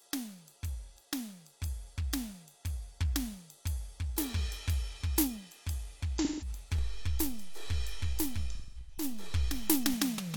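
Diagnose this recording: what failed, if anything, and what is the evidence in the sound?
The codec failed with AAC frame loss with concealment. From 6.18 to 6.48 s the music turns smeared and phasey for about 170 ms, which fits four lost frames. The decoder rebuilt them from the last good spectrum with scrambled signs or interpolated energy. A second burst runs 8.55 to 9.04 s. About 341 ms is lost, scattered over roughly 430 ms, with the longest run about a fifth of a second.

The converter stage shows a DC step. At 6.79 s the waveform's zero line jumps, heard as a low thump. The offset holds until 9.94 s, where it clears. The music itself carries on unchanged across the step. This points to a recalibrating converter or an offset input being switched in.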